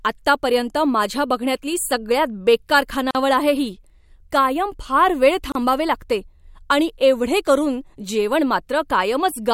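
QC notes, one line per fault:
3.11 s and 5.52 s, gap at a join of encoded pieces: the speech stops for 41 ms and 32 ms, then resumes exactly where it left off. That points to encoder start delay and end padding left in at the joins, not a dropout that loses sound.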